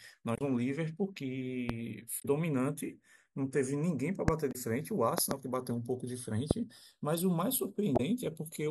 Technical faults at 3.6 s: channels drifting apart

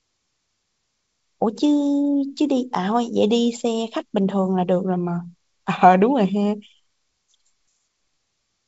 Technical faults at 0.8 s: none

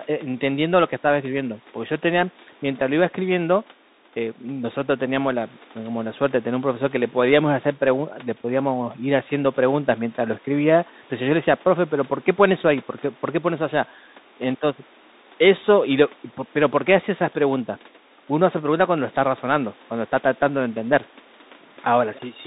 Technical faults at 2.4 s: Bluetooth CVSD headset codec

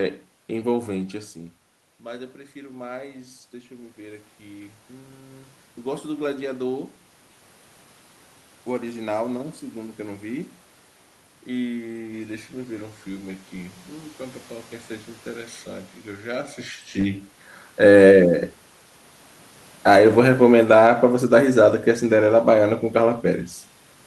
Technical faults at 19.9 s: automatic gain falling

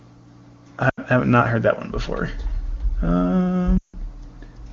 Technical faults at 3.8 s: lost AMR speech frames

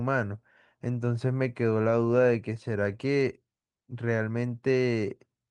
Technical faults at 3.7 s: none

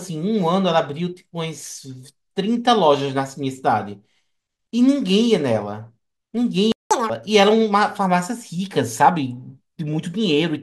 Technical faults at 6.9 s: playback stall; catch-up at higher speed

